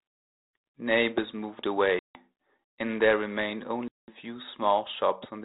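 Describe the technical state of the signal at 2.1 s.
A hard-edged silent gap runs from 1.99 to 2.16 s, from packet loss on an ADPCM call: about 160 ms of packets dropped, leaving the decoder's predictor briefly out of step afterward.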